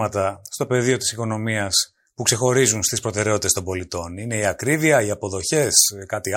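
From 1.73 s to the end, the speech turns thin, bright and hissy on sibilants: pre-emphasis left on, CD 50/15 µs treble boost uncorrected, about 8 dB up at 10 kHz.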